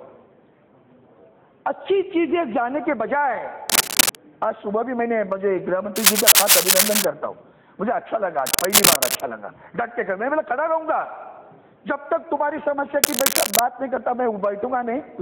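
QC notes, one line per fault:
3.69–4.15 s, 5.96–7.05 s, 8.46–9.21 s, 13.04–13.59 s, cable scratch noise: likely a worn connector shifting, so jumpy contact resistance adds rough scratching bursts about 5 dB above the sound.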